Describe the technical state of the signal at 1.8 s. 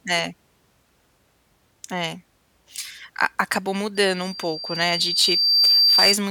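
At 1.8 s the speech signal is intact, with no audible fault at that moment.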